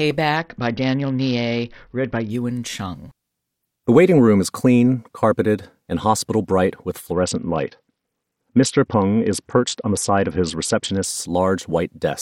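A speech clip with two stretches of Bluetooth SBC bit pool drop. From 0.37 to 2.30 s, and again from 7.13 to 11.05 s just after "and hospital bright with", the treble goes dull and a gritty noise rises under the speech. The link was congested, so the sender cut the bits per frame. The upper sub-bands got almost nothing, and the rest were coarsely quantised. The sound fits a bit pool falling from 31 to 7, near 61 kbps.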